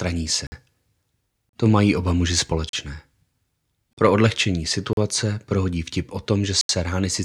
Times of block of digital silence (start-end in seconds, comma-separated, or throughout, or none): 0.47-0.52, 1.49-1.53, 2.69-2.73, 3.93-3.97, 4.93-4.97, 6.61-6.69